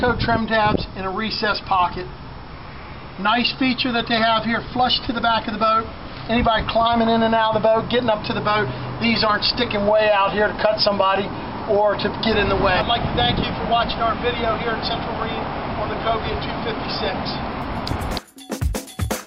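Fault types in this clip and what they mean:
No faults found: nothing in the audio points to a problem in capture, processing or playback.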